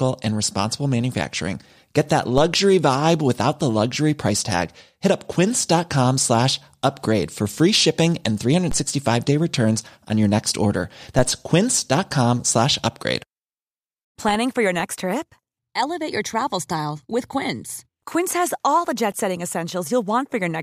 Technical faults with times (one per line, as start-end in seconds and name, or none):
2.38 DC step
8.71 DC step
11.19 DC step